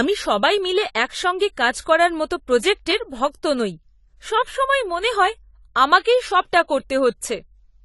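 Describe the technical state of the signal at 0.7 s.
At 0.7 s the speech is likely passing through AAC compression, and the starved bitrate, which fits about 32 kbps AAC-LC, runs for the whole clip. Coarse quantisation removes everything above 11.5 kHz and thins the remaining spectrum, so the sound is dull and smeared, with fizzy sibilants.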